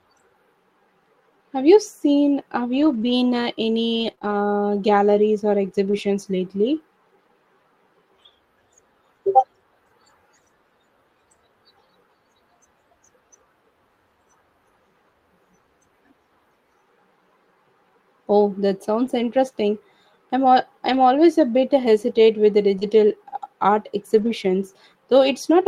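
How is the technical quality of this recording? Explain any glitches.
The recording has three kinds of network damage, all in the second half except one early stretch.

Scattered short gaps occur between 2.73 and 5.95 s. A handful of packets, around four, arrived too late or not at all, each a brief hole of about 20 ms at most. The receiver covered each one by extending the preceding sound, so only a tiny fraction of that stretch is patched. The speech stays clear, but brief ticks and small hiccups break through at those points.

Lost packet rebuilt from error correction is heard at 19.05 s (20 ms), 20.93 to 20.99 s (40 ms), 22.81 s (20 ms) and 24.17 to 24.31 s (80 ms, from four separate packets). At each point the following packet carried a low-bitrate backup copy, and the decoder played that instead of leaving a gap. Nothing drops out, but those moments sound rougher and noisier.

Short concealed packet loss appears at 22.79 to 22.83 s, where about 20 ms never arrived in time. 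The receiver filled the hole by continuing the last sound, following its pitch if voiced or using shaped noise if not, then crossfaded back to real audio. It overlaps the rebuilt packet at 22.81 s, giving a brief smear or wobble there, and a short consonant could be swallowed.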